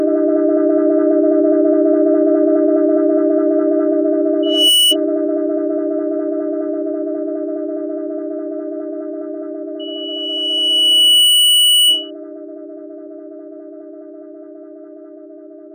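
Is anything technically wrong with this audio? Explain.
Yes, there's loudspeaker feedback squeal at 4.43–4.96 s and 9.79–12.11 s. A mic is hearing its own speaker, and the loop gain tops one at 3 kHz. That tone swells quickly the first time and over about a second and a half the second time, ending a few dB above the sound.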